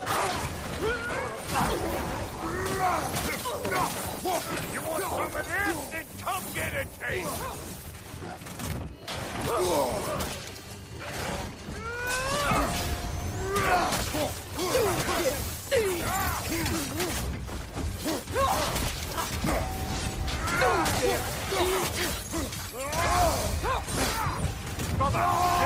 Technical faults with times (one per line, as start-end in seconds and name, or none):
none